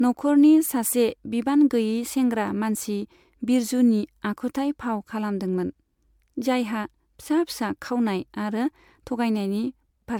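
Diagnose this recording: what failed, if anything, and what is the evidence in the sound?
Codec stage: swirly, hollow speech all the way through, with smeared attacks and nothing above 19.9 kHz. Likely generation loss, fitting 128 kbit/s MP3 re-encoded about seven times.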